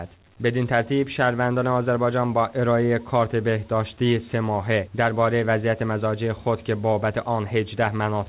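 There are no technical faults to describe at any point in the clip, which has passed through a WebRTC call path whose G.711 A-law coding leaves nothing above 4 kHz.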